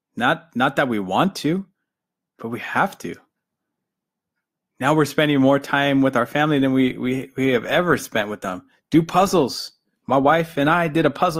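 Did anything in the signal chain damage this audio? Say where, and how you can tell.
Yes, at the network stage, where an adaptive stream switched to a lower bitrate. From 6.59 s to the end at 11.39 s, the speech abruptly takes on more audible codec artefacts, with no gap at the changeover. That points to the player dropping to a cheaper encoding when throughput fell, consistent with Opus stepping down from around 64 to 24 kbit/s and discarding high-frequency detail to fit.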